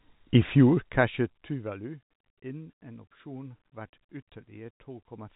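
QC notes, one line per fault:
The speech sits in a telephone-band channel with nothing above about 3.8 kHz, consistent with G.711 mu-law coding at 64 kbps, and its level changes move smoothly, with no fault to log.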